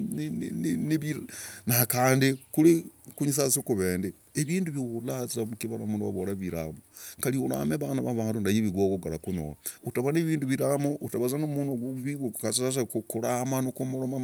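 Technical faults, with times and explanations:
No technical faults detected in this speech recording.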